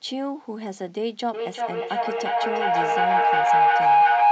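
From 1.34 s to the end of the speech, a feedback howl builds: a tone near 700 Hz swells until it sits about 12 dB above the speech, with the loop repeating roughly every 0.4 s. Two devices on the same call share the room, so each trip from microphone to loudspeaker and back adds level, and the loop narrows onto the frequency it favours. Ordinary echo repeats and fades; here the repeats grow and never break off.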